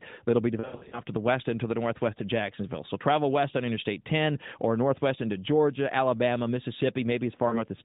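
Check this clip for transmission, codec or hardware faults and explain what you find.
Yes, there are lost AMR speech frames at two points in this narrowband mobile speech.

From 0.60 to 1.01 s, between "that'll be" and "to the west and", about 240 ms of audio drops out in bursts spread over roughly 320 ms. The longest gap is 80 ms, which fits about a dozen 20 ms frames in all. At each gap the decoder repeats the last good pitch and spectral shape at falling gain, so the sound smears, warbles and sags before recovering roughness. A second 40 ms loss, consistent with two frames, occurs at 7.48 to 7.61 s. On a spectrogram these show as stretched, frozen harmonics fading toward silence, capped at 4 kHz. In the waveform they appear as decaying envelope dips.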